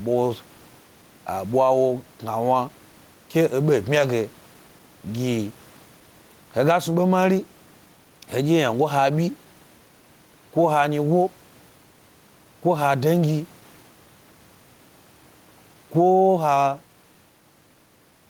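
Gain pumping runs through the whole clip, with the gain swinging by around 10 dB, likely from excessive input gain feeding a fast limiter. Clock drift between sender and receiver is also present throughout, with the sender's clock running roughly 4 percent fast, so the receiver's buffer keeps overfilling. Repeated timing corrections follow from 0.07 to 18.12 s. The receiver trims short pieces to keep pace with the 104 percent rate, producing small, unevenly spaced edits. The room noise sits about 36 dB below the speech.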